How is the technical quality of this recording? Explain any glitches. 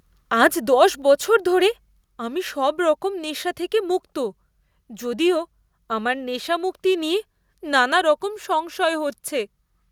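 One level glitch is audible. At about 2.04 s, between "আজ দশ বছর ধরে" and "আমি সবরকম নেশা থেকে", a microphone volume stepped down event occurs: speech and background drop abruptly by about 2 dB, likely because the call software lowered the input gain in a single step.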